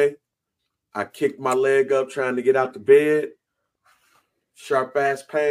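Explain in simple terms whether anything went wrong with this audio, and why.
Channel delay (comb filtering) runs from 1.58 to 3.86 s. During this stretch, one side of the stereo sound arrives a tiny moment late, about one sample, and the two sides are then combined into one. Wherever they line up badly they cancel, carving a notch near the top of human hearing, around 20 kHz. The effect is a slight dulling or loss of airiness at the very top of the sound.

Corrupt frame decoded shows up twice, at 2.64 to 2.68 s and again at 5.05 to 5.10 s. Each time, a small chunk of the compressed audio, probably a single frame, was damaged, but the player used it anyway. The garbled data put sound energy at the wrong pitches for the length of that chunk, producing a brief chirp or burst of noise. The later burst is much louder.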